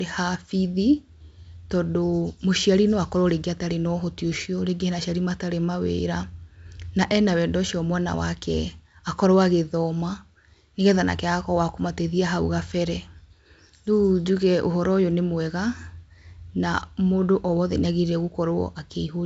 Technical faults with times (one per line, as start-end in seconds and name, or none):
none